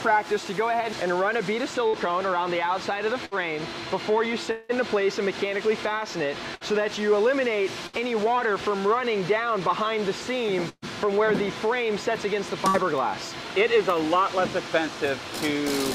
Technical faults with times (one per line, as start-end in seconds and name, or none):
1.87-1.96 burst of packet loss
3.25-3.34 burst of packet loss
4.51-4.72 long network dropout
6.55-6.64 burst of packet loss
7.87-7.96 burst of packet loss
10.69-10.85 burst of packet loss
12.68-12.77 burst of packet loss